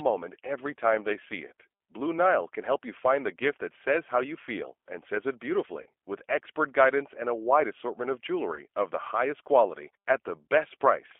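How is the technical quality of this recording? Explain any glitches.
The recording is clearly degraded. The codec colouring runs through the whole clip, and there are two brief dropouts.

Throughout, the speech sounds thin, slightly rough and synthetic, confined to a telephone band of about 300 Hz to 3.4 kHz. This is the G.729 codec at 8 kbit/s. It rebuilds each frame from a vocal-tract filter, pitch prediction and a few pulses, so fine detail and all high frequencies are lost.

At 5.82 to 5.88 s, just after "feel and says it" and before "with expert guidance and", the sound smears into a short buzzy tone or coloured noise that fades. At 8.55 to 8.61 s, after "a wide assortment of" and before "of the", the same happens more briefly. Both are VoIP packet loss concealed by the speech codec. The decoder fills gaps of about 40 ms and 20 ms (which fits two lost packets, then one) by repeating its last pitch and filter at falling gain. 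Because each frame depends on the previous one, the sound stays weak for a moment after packets return.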